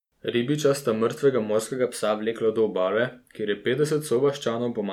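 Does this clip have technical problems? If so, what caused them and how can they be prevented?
Yes. After "sta mrtvega", from 1.72 to 2.36 s, speech runs 5.6% fast and about 95 cents sharp, then snaps back before "do obale kjer je". This is likely a drift correction step. Smoothing clock-drift correction into gradual resampling prevents it.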